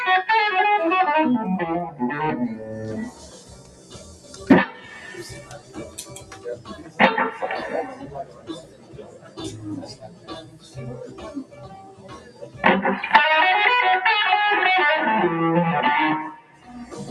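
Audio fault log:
Throughout: noise suppressor applied to music or sounds. A speech-oriented suppressor stays active across the whole clip and treats sustained tones, ambience and reverberant decay as noise to be removed. Its gain therefore swings by roughly 15 dB as material changes, with transients passing largely intact while held portions and tails are pulled down. The result is audible pumping and a thinned, fluttering texture wherever sound is sustained rather than struck.
3.1–4.45 s, 4.7–4.91 s, 5.37–6.99 s, 8.02–9.38 s, 9.9–10.77 s, 11.44–11.66 s, 11.82–12.6 s, 16.41–16.69 s: sound cut by the noise suppressor. In each span the suppressor misclassifies the sound as noise and attenuates it beyond the surrounding material, by about 7 to 10 dB at the deepest point, with the 8.02 s, 9.9 s and 11.44 s spans reaching about 10 dB. The longer spans near 3.1 s, 5.37 s and 8.02 s each lose around one and a half seconds of level. 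Sustained and decaying content sinks in level or has its tail shortened, while abrupt onsets within these spans come through largely unaffected.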